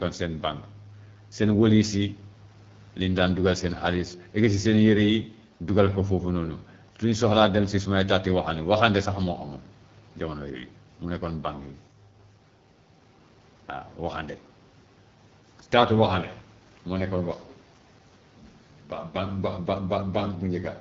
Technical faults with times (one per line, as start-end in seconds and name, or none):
0.00-20.80 AMR wideband (HD Voice) codec